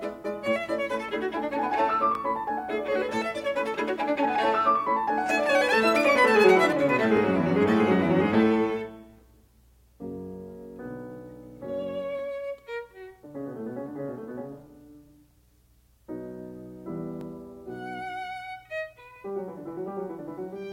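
A brief click or stutter breaks into the music at 2.15–2.17 s, 7.17–7.19 s, 12.19–12.21 s and 17.21–17.23 s. These are overlapping chunks: each 5-second chunk starts 20 ms before the previous one ends, so that sliver plays twice at every join.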